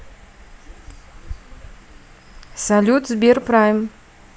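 No technical faults are audible.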